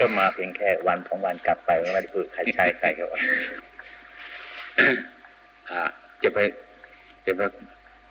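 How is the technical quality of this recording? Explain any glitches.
A steady ticking runs through the whole recording, ten small clicks per second, riding on the sound and present only while there is signal. This is the resampler restarted on every block: the audio was processed in 100 ms blocks, and the edges point to an upsampling from 24 kHz to 48 kHz. Each block was converted in isolation, so the filter lacked the neighbouring samples at every boundary and left a small error there, heard as a tick at the block rate.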